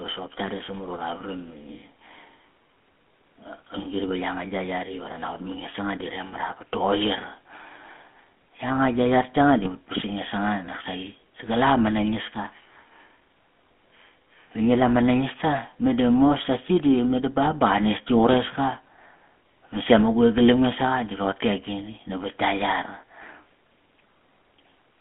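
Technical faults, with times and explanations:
Throughout, GSM full-rate codec: the speech has a buzzy, gravelly roughness. The coder models the vocal tract and excites it with a sparse, regularly spaced pulse train, which fits the 13 kbps full-rate scheme. The band is held to roughly 200 Hz to 3.4 kHz. A spectrogram shows a hard ceiling near 3.4 kHz with nothing above it, smeared harmonics, and grainy, pulse-like texture within voiced stretches.
9.56 to 9.69 s and 17.46 to 17.51 s, GSM bit errors: brief squawks and gargling pops break through, the second falling between "sasi di meda ba" and "ba qa nestki". Corrupted filter, pitch or gain values reached the decoder, so a few frames were rebuilt with the wrong spectral shape or level. On a waveform these show as sudden amplitude jumps, and on a spectrogram as short blocks of misplaced energy, about 130 ms and 50 ms long.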